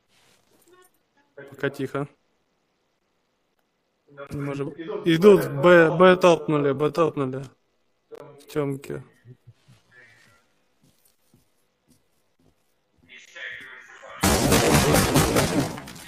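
From about 4.96 s to the end, processing likely stretched the audio to fill a longer slot at about 0.62 times its pace, repeating short pieces to hold pitch. This time-stretched section slows abruptly while pitch stays put, leaving the sound dragging.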